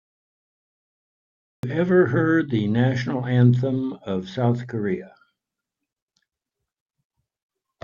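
Speech clip with a cut-off start: it sits in dead digital silence for the first 1.63 s, then the audio jumps in partway through a sound with no natural onset or fade. The capture or stream evidently began late, after the talker had already started.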